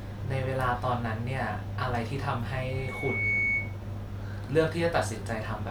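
From 2.61 to 3.79 s a loudspeaker feedback squeal rises at 2.2 kHz. The microphone picks up its own loudspeaker, and the loop gain exceeds one at that pitch. Unlike a steady interfering tone, it swells over roughly three-quarters of a second and ends a few decibels above the speech.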